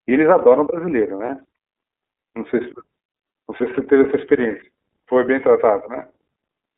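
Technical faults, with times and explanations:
Throughout: iLBC codec. The speech is confined to a narrow telephone band, roughly 250 Hz to 3.7 kHz, so it sounds thin and muffled at the top. The codec rebuilds each block of sound from a coarse model of the excitation signal, which leaves a plainly audible rough, synthetic grain on the voice. The block length and texture fit the 13.33 kbps iLBC mode with 30 ms frames.
1.25 to 1.30 s: lost iLBC frames. For about 30 ms, the speech turns into a brief held, slightly buzzy sound. The gap fits a single missing 30 ms frame. The decoder filled it by repeating the last pitch cycle with some noise mixed in. Each iLBC frame is coded without depending on the frame before it. So the voice returns to normal almost immediately once real data arrives again.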